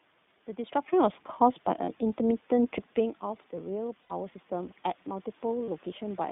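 The whole clip carries the sound of the iLBC codec: the speech is confined to roughly 150 Hz to 3.6 kHz, so sibilants and breathiness above that are missing, and the voice has a plainly audible rough, slightly synthetic texture. The coding damage fits iLBC's 15.2 kbps mode with 20 ms frames, where each frame's excitation is coded independently of the previous one. The room noise in the background is also passed through this narrow, coarse coding.

At 1.84 to 1.89 s there are lost iLBC frames: a 40 ms gap, consistent with two missing 20 ms frames. The decoder fills it by repeating the last pitch cycle with added noise, which comes through as a brief held, faintly buzzy vowel. Because the frames stand alone, the voice recovers cleanly as soon as real data returns.

From 2.17 s to 6.27 s there is automatic gain rising. The input level drops by about 13 dB, partly because the talker moves away from the microphone around 3 s. 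The gain control responds by slowly adding about 5 dB. Voice and room noise swell together over several seconds rather than jumping. Because the gain only makes up part of the drop, the speech stays quieter than at the start.

More lost iLBC frames occur at 4.02 to 4.12 s. This is the longest gap, about 80 ms, consistent with four lost frames. The concealment here lasts long enough for the repeated pitch cycle to be heard as a held, breathy buzz before normal speech resumes. The last loss, at 5.64 to 5.69 s, is another 40 ms gap with the same short held-vowel sound and immediate recovery.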